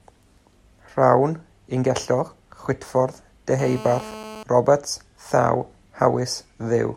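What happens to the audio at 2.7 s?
Nothing goes wrong at 2.7 s; the audio carries straight through that moment with no break, click, dropout or distortion.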